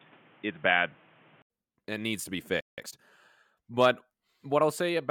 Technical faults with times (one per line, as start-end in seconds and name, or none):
0.00-1.50 input switched to a poorer device
2.61-2.78 playback stall
2.78-3.12 time-compressed catch-up